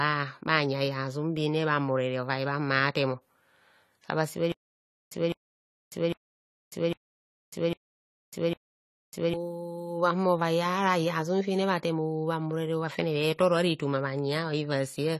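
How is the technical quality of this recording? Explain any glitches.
The recording has two problems: lossy-codec damage over the whole speech clip and a stretch of repeating stutter in the middle.

The AAC compression shows throughout as dull, smeared speech with a warbling, fizzy edge on sustained sounds and sibilants, and nothing above 14 kHz. The likely cause is AAC-LC coding at a low bitrate, consistent with around 32 kbps. At that rate the encoder lowers its cut-off and quantises the spectrum coarsely against its hearing model, leaving holes and noise-filled bands that are plainly audible.

The stutter with silent gaps runs from 4.52 s to 9.34 s. A 205 ms burst plays, then about 598 ms of dead digital silence follows. The pattern repeats six times at an even period of about 803 ms, so the speech that belonged in that stretch never arrives. This likely comes from a player or stream stalling, replaying its last buffered fragment at each retry, then running empty until the next attempt.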